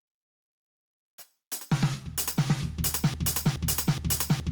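From the start, the music shows gain pumping: the gain swings by about 5 dB, pulled down under each loud hit, so the level seems to breathe in time with the playing. The likely cause is gain set far too high, with a fast limiter or compressor clamping down on every peak. Unlike a plain fade or a dropout, the dips track the loud moments, and quiet and loud passages end up squashed close together.

At 3.14 s a broken-record loop takes over and runs to the end: a 0.42 s fragment repeats exactly, back to back, about 2.4 times a second, and the music that should have followed never arrives. The likely cause is a stall in the player, encoder or stream, which kept resending the last fragment it held. What sets this apart from a short stutter or an echo is that every repeat is identical and nothing fades.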